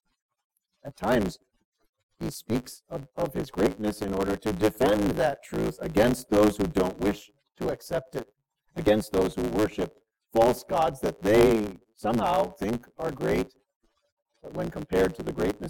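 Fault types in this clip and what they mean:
Block size mismatch (truncated): one stage hands over longer blocks than the next stage takes in, so the tail of every block is discarded. Throughout the clip this shows as a steady buzz at about 109 Hz, the rate of the cuts, with the sound running about 1.16 times fast while keeping roughly its normal pitch. That fits 512-sample blocks being cut short. A plain speed or sample-rate error would raise the pitch along with the tempo and leave no buzz.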